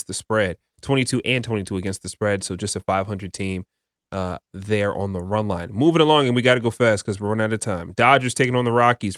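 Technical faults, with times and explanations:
No technical faults can be heard in this speech recording. There is nothing here to time or explain.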